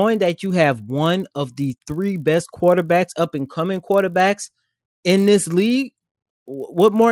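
A steady 50 Hz buzz rides under the speech for the whole clip, present only while sound is present. It comes from a resampler restarted on every block: each 20 ms block was converted separately, likely from 24 kHz to 48 kHz, leaving an error at every edge.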